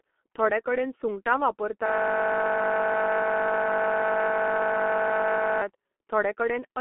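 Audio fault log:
throughout G.723.1 codec: heavy low-bitrate telephony coding, fitting roughly 6 kbit/s, leaves nothing above about 3.8 kHz, so speech sounds muffled and hoarse with smeared consonants.
1.86–5.62 s system hang loop: after "थोडे कडेन सुंगटां" the system froze while the audio hardware kept replaying one 20 ms chunk, producing a steady 50 Hz buzz until it recovers.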